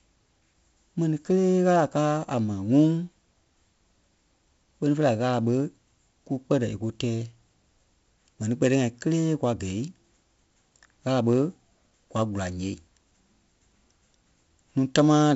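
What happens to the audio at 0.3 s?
The speech at 0.3 s is coded as 4-bit ADPCM compression, which runs through the whole clip rather than starting at that moment. Each sample is stored only as a coarse 4-bit step from a predicted value, with the step size adapting as it goes. The damage is heavy: a gritty hiss rides every loud syllable, consonant attacks smear, and nothing is present above 7.7 kHz, which fits a roughly 16 kHz, 64 kbps stream.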